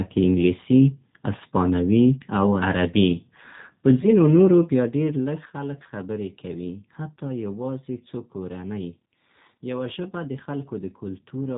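The whole recording runs through the G.729 codec at 8 kbit/s, and the damage is plainly audible. With nothing above 4 kHz, the speech sounds narrow and boxy. Because the decoder rebuilds each frame from a vocal tract model and a few pulses, there's a rough, slightly synthetic edge throughout.

At 4.01 to 4.08 s there's a short dropout from VoIP packet loss concealed by the speech codec. About 20 ms of audio went missing, which fits a single lost packet. The decoder filled the hole by stretching the last frame into a brief buzzy tone or coloured noise that fades. Recovery takes a few more frames, so the speech stays thin and smeared for a moment after the gap.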